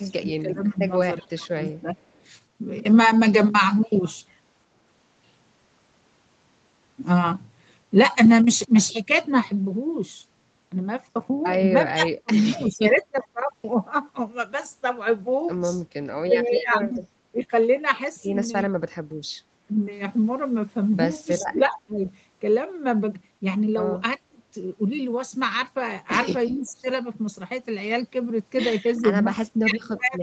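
Speech that has come through a call, with its top end stopping at 8 kHz, consistent with an Opus-coded path. From the start to 1.96 s, and again from 11.93 s through to the end, the talker's own level sinks in places, by roughly 20 dB early on and as much as about 25 dB later. The dips come and go in pieces, adding up to about a second in the opening stretch. This is speech suppressed in double talk, likely because an echo canceller treated the voice as echo while the far side was also speaking and turned everything down together. What marks it out is that nothing new is heard: the talker simply gets quieter or breaks up. Echo leak is the reverse, an added sound. A faint, late copy of the voice trails the original by about 376 ms, from 1.22 to 2.22 s at roughly 40 dB below the speech and more noticeably from 26.49 to 29.0 s at roughly 30 dB down. That fixed lag, with the copy lying under the live speech rather than replacing it, points to a loudspeaker's output leaking past the echo canceller and being sent back.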